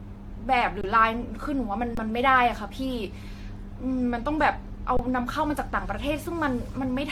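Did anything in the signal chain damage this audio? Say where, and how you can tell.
Yes, two stages left marks. At the codec stage, the whole clip has a swirly, hollow, smeared quality with blurred attacks and nothing above 18.6 kHz. That's more damage than one pass would cause, so it was likely generation loss from repeated AAC-LC re-encoding at around 96 kbit/s, maybe four passes.

At the buffer or driver stage there are three underruns with held sample, at 0.81–0.84, 1.95–1.97 and 4.97–4.99 s, each about 23 ms long, which fits a 1024-sample buffer. The waveform freezes flat at its last value, then resumes after roughly 20 ms of live audio was dropped.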